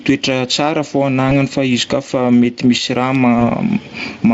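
Gain pumping runs through the whole recording. The swing is about 15 dB. Loud and soft passages sit unnaturally close in level, and the speech sounds squashed. The likely cause is input gain set far too high, with a fast limiter or compressor pulling it back on each peak.

VoIP packet loss concealed by the speech codec occurs at 1.29 to 1.32 s, between "tsara fô" and "fa izy koafa mety". A dropout of about 20 ms fits one lost frame. The decoder filled it by extending the last pitch and spectral shape at falling gain. This leaves a brief stretched sound that fades, and the voice stays weak or distorted for tens of milliseconds just after. The same thing happens at 3.39 to 3.44 s, again covering about 20 ms. The Speex coding itself adds little audible damage.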